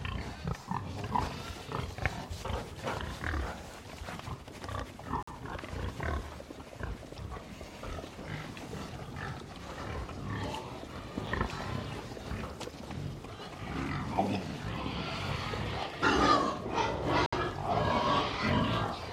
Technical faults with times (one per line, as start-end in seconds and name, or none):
5.23-5.28 gap between stream segments
11.27 gap between stream segments
17.26-17.33 gap between stream segments